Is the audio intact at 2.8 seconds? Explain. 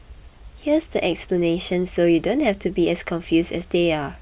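Yes, the audio is intact at 2.8 seconds, with the speech continuing there without any audible fault.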